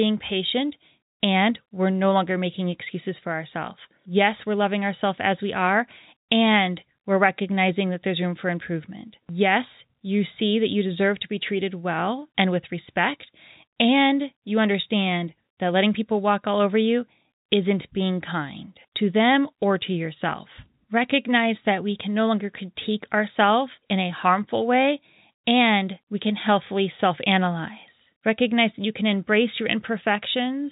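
No technical faults are audible.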